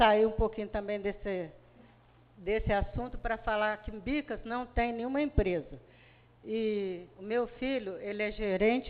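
From 2.41 to 3.98 s a mains buzz appears, a raspy, steady tone built on 50 Hz harmonics reaching into the kilohertz range. Sharp switching spikes, twice per mains cycle, leak into the path, sitting roughly 40 dB below the sound.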